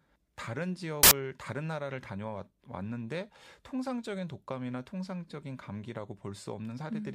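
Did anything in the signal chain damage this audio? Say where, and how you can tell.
Yes. The damage sits in sample-format conversion. From 1.03 to 1.11 s the speech turns into a burst of loud, harsh broadband noise, about 80 ms long. These are samples built from the wrong bytes. The bytes were misordered or misaligned, so the rapidly changing low bits became each value's dominant part.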